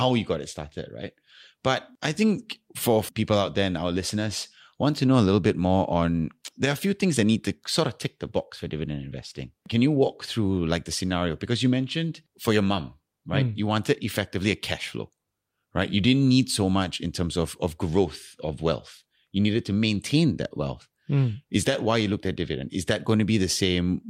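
Listening closely to the speech recording, nothing stood out as a technical problem at any point.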